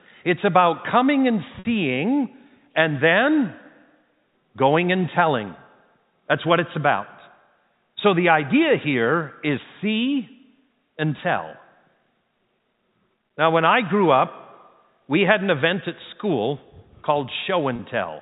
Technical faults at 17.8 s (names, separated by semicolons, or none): packet loss with pitch repetition